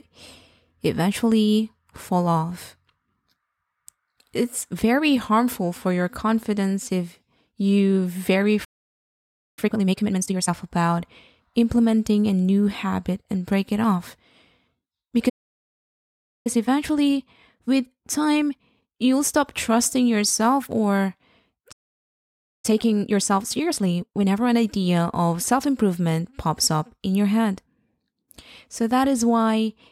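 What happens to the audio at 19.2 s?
Speech sounds hurried at normal pitch: time-compressed catch-up from 16.47 to 19.47 s, the player cutting and cross-fading small pieces to play about 1.15 times faster.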